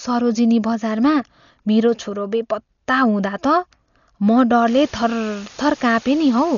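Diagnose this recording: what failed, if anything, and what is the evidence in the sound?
Dolby Digital compression, throughout the speech. This is a codec-stage fault. Nothing is present above 6.9 kHz, so the speech sounds dull and band-limited, and there is heavy codec damage: rough, fluttering noise where the encoder ran short of bits. The likely cause is an AC-3-style encoder at a very low bitrate, consistent with around 40 kbps. It narrowed the band and left many frequency lines without mantissa bits, so the decoder filled them with noise.

Low bit depth with dither, from 4.66 s to the end. This is a sample-format conversion fault. A steady, even hiss appears suddenly and stays constant, sitting only about 20 dB below the speech, with no harsh distortion. The signal was requantised to very few bits, which fits a 6-bit word, and dither was added before rounding. That turned the rounding error into flat white noise rather than distortion that follows the signal.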